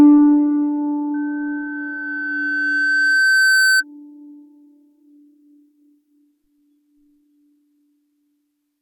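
It's a music clip with two problems. From 1.14 to 3.84 s there's loudspeaker feedback squeal. A mic is picking up the speaker it feeds, so a 1.5 kHz tone swells over roughly three seconds until it sits about 5 dB above the music. Then at 6.19 s the adaptive stream drops to a lower bitrate and stays there to the end. There's no gap, just a sudden loss of quality, with nothing above 18.4 kHz and a thinner, more synthetic top end. That fits a slowed connection forcing a switch from something like 96 kbit/s AAC down to a 24 kbit/s HE-AAC rendition.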